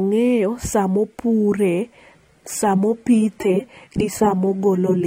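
Speech that abruptly loses clarity at 2.11 s and stays degraded to the end: the treble dulls, with nothing above 17.4 kHz, and codec artefacts thicken, with no gap. This is an adaptive stream at a lower bitrate, consistent with a switch from about 96 to 32 kbit/s AAC-LC.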